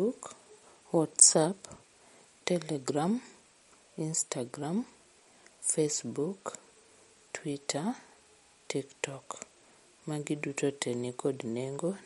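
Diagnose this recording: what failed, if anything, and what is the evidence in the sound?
The failure is at the codec stage, most likely MP3 compression at a low bitrate, roughly the 48 kbps range. Throughout the speech, nothing is present above 11.2 kHz, a hard treble ceiling that the encoder imposes at a fixed frequency. The damage is plainly audible: weak frequency components flicker in and out between frames, giving a watery, swirling texture, with metallic chirping on s sounds and softened consonant attacks.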